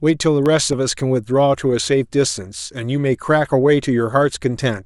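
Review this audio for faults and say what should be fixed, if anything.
There's a short run of CD scratch ticks in this speech clip, five of them between 0.46 and 1.53 s, landing at roughly four or five a second, with the longest only a couple of milliseconds. That regular spacing is the giveaway. A blemish on the disc wipes out more data than error correction can rebuild, once per revolution, and the player papers over the hole by interpolating or muting. Fix it by re-ripping from a cleaned or resurfaced disc with a secure ripper that retries bad sectors.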